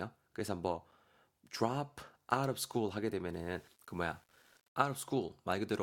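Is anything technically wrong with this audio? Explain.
Yes, there are two faults.

At 0.91 s there is a gap between stream segments: two adjacent segments' timestamps leave a hole of about 6.4 ms that the player fills with silence. It is heard as a brief, hard-edged dropout. No audio is lost; the sound simply resumes slightly later.

From 3.33 to 4.83 s the speech turns grainy, with distortion that tracks the signal and sits around 35 dB below it. This is likely low bit depth without dither: rounding to roughly 9 bits leaves a correlated quantisation error that roughens the quieter passages.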